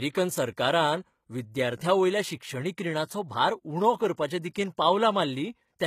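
From start to finish, the treble of the speech sounds bright but synthetic: s sounds come out gritty and lispy, and the upper spectrum has a metallic sheen, with nothing at all above 14.9 kHz. This is likely HE-AAC compression at a low rate, consistent with roughly 20 kbps. The codec sends only the lower band and rebuilds the top by copying lower bands upward under a coarse envelope, so the upper harmonics no longer line up with the real ones.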